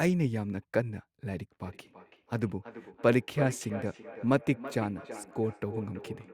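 From 1.66 s to the end, feedback echo between two devices returns the speech at a fixed interval of about a third of a second, around 13 dB down and thin and ringing. Unlike room reverberation, the delay stays regular.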